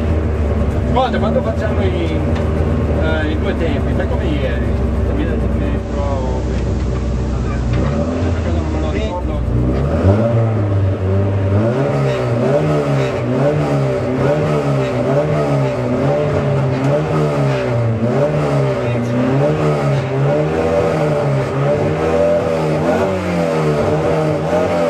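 From 5.75 s to 9.24 s a hiss appears underneath, roughly 30 dB below the programme, and the level drops by about 1 dB. The change fades in over about 196 ms and fades back out at 9.24 s. This is digital radio blending to analogue: the receiver lost the digital stream and cross-faded to the station's FM broadcast, then returned to digital once reception recovered.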